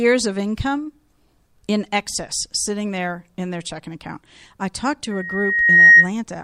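From 5.11 s to 6.09 s there is loudspeaker feedback squeal. The microphone picks up its own loudspeaker, and at 1.9 kHz the loop gain passes one. A steady tone swells over about 0.7 s, ending about 15 dB above the speech.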